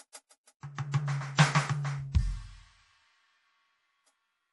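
MP3 compression runs through the whole music clip: nothing sounds above 11.5 kHz, and the texture is plainly watery and swirly, likely from a starved MP3 encoder cutting the treble and dropping weak frequency lines frame by frame, which fits a bitrate around 48 kbps.

Pre-echo appears at 0.43, 0.60, 0.75, 0.92 and 2.12 s, as a short hiss lasting 41, 29, 30, 21 and 29 ms before each sharp attack. Quantisation noise sized for the loud hit spreads across its whole block, into the quiet just before it.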